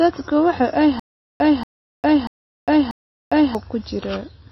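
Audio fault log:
throughout, MP3 compression: likely a starved low-bitrate encode, near 24 kbps, cutting everything above 5.8 kHz and dropping weak detail, so speech sounds dull, watery and swirly.
0.99 to 3.55 s, stutter with silent gaps: likely a stalled stream replaying its last fragment, so a 233 ms burst repeats four times, each followed by 405 ms of silence.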